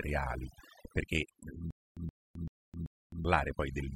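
Overdone noise removal runs through the whole of this short speech recording. A noise reduction stage set far too aggressively has pushed individual frequency bands down or out entirely wherever they came close to its noise estimate, and it has taken the quieter components of the voice along with the noise. The result is a background that has dropped away, dotted with twinkling, chirpy specks. A stutter with silent gaps starts at 1.71 s, just after "perché eh", and lasts until 3.25 s. A fragment of about 123 ms plays, then about 262 ms of dead digital silence follows, and the same fragment comes back on a steady cycle of roughly 385 ms, four times in all. This pattern is likely a stalled player or stream that replays its last buffered piece at each retry and then runs dry, so the speech that belonged in that stretch is simply missing.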